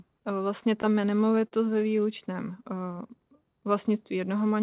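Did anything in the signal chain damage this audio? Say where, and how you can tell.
Yes. Repeated stalls (stutter) appear at the network and jitter-buffer stage between 0.82 and 1.99 s: fourteen brief hangs, the longest about 43 ms, where the sound is stretched rather than cut. Packets arrived late, the buffer ran dry, and the receiver held the last sound until data resumed.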